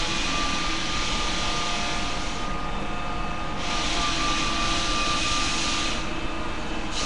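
Throughout, the sound carries a rough, hissy halo and smeared texture with nothing above 10.6 kHz, likely Nellymoser compression filling starved bands with noise, consistent with about 44 kbps.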